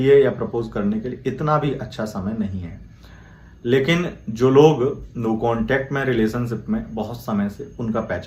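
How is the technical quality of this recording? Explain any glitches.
No glitches can be heard anywhere in the recording, and the signal holds steady without any dropouts, clicks or distortion.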